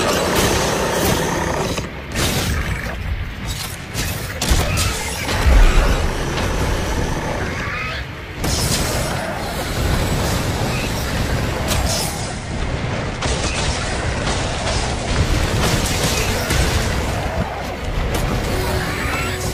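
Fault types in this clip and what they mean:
Digital radio blending to analogue: the receiver lost its digital signal and cross-faded over about 171 ms to the station's FM broadcast, returning at 15.35 s. From 12.05 s the audio drops about 2 dB and carries faint hiss roughly 35 dB down.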